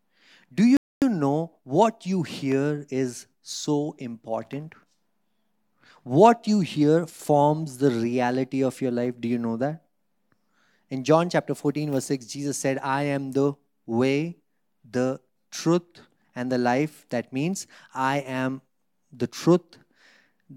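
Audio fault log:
0.77–1.02 s, rebuffering stall: the speech cuts to dead silence for about a quarter of a second, then picks up exactly where it broke off, resuming on "know what you hear". No material is skipped or repeated, so the gap is pure added time, about 0.25 s. The player exhausted its downloaded audio and paused playback until more data arrived, rather than concealing the shortfall or jumping ahead.
7.10–7.19 s, one channel drops out: just after "you hear", the level falls abruptly by about 6 dB for roughly 90 ms, then snaps back before "the reality of your". The clean 6 dB step is the signature of a stereo pair summed to mono with one side missing. Content common to both channels loses half its contribution, and anything carried only in the absent channel vanishes. The likely cause is a brief loss of one stereo channel.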